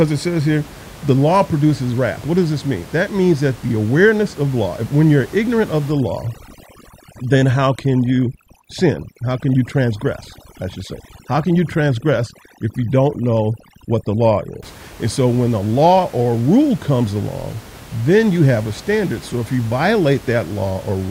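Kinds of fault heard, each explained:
Overdone noise removal: from 5.92 to 14.63 s, just after "when you're ignorant of", a noise reducer set too hard shuts off bands sitting near its noise estimate, so the room noise drops and breaks up into twinkly specks.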